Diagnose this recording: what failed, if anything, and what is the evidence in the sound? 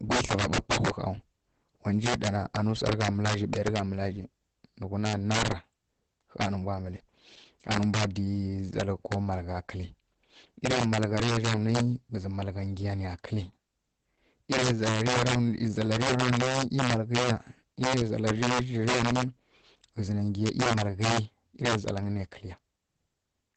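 The integer overflow fault sits at the sample-format conversion or gain stage. Throughout the speech, the loudest peaks snap into harsh cracks rather than flattening. The level was pushed about 11 dB too hot, and the small fraction of samples that exceeded full scale wrapped to the opposite sign. That polarity flip makes these cracks far sharper than ordinary clipping.

The Opus voice compression fault sits at the codec stage. Across the whole clip, the speech sounds muffled, hoarse and faintly robotic. Nothing is present above 8.5 kHz, which matches a wideband limit. The coarse excitation points to a low rate of around 12 kbps in SILK mode, unlike a plain low-pass filter, which would dull the sound without adding this texture.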